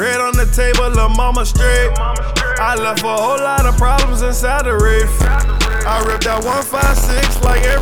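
From 5.20 s to the end there's buffer tearing, a rattly robotic buzz at about 94 Hz, which fits a 512-sample buffer. The writer and reader have slipped, so a small slice of each buffer carries audio from roughly 20 ms earlier, with a hard join on both sides.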